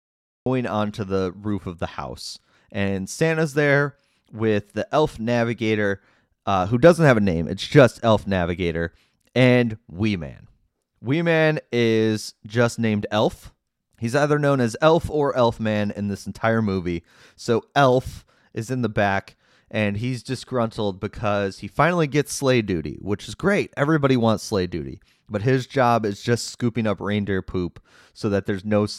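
From 0.0 to 0.46 s there is digital silence, and at 0.46 s the speech cuts in abruptly mid-sound just before "onto the roof of". This cut-off start shows that capture began late, so the opening has no natural attack or onset.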